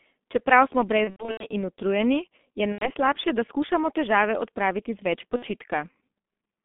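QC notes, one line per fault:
Throughout: G.723.1 codec at 6.3 kbit/s. The band runs only 200 Hz to 3.5 kHz. Heavy coding leaves the sound muffled and hoarse, with smeared consonants.
1.04–1.46 s, 2.72–2.92 s, 5.36–5.46 s: VoIP packet loss concealed by the speech codec. The decoder fills the gaps by repeating its last state, giving a fading buzz or coloured noise. The first gap is the worst, with scattered losses.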